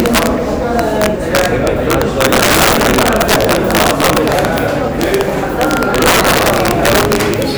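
Integer overflow runs through the whole recording of sounds. The signal was driven about 6 dB past the integer limit. Nothing held the peaks at full scale. Instead, each peak that crossed the limit wrapped around to the opposite extreme. Only a small share of samples go over, perhaps one or two in a hundred. Each one still swings across the full range. The result is violent, snapping cracks on the loudest moments. They are far harsher than ordinary clipping.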